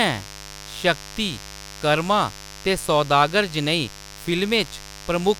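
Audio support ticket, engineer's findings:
Steady raspy buzz under the speech, whole clip, roughly 20 dB below it. Mains buzz, 50 Hz base. Probable component: dimmer, rectifier or unshielded cable. Switching spikes twice per mains cycle, harmonics extending into the kilohertz range.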